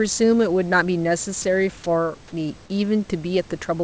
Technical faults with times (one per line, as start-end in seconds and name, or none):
1.42-1.44 sound dropped by the voice detector